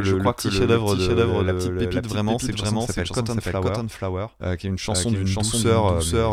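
A second, delayed copy of the audio was likely mixed in, so the speech repeats itself about half a second later at roughly equal level throughout: a doubled audio track.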